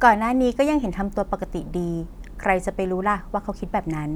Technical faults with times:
none

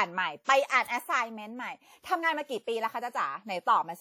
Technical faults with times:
0.00-4.01 WMA compression

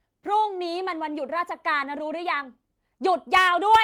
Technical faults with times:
none

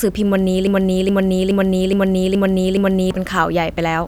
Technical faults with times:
0.67-3.11 broken-record loop

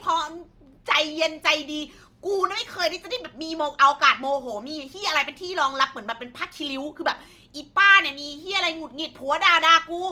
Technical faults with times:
0.00-10.12 Opus compression

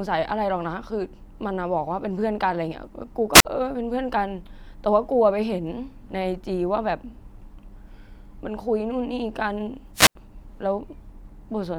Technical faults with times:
3.33-3.45 wireless microphone squelch dropout
9.94-10.15 wireless microphone squelch dropout

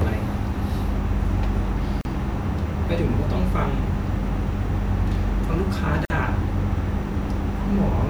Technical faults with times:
2.01-2.05 gap at a join of encoded pieces
6.05-6.10 gap at a join of encoded pieces

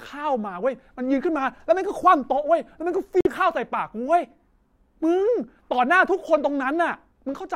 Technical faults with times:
3.21-3.27 Bluetooth stall

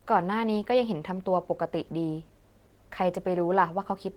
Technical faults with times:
0.00-4.16 Opus voice compression

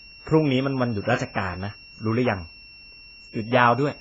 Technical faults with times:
0.00-4.01 switching supply whistle
0.00-4.01 AAC compression

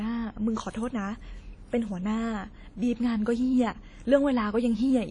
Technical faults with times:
0.00-5.10 WMA compression

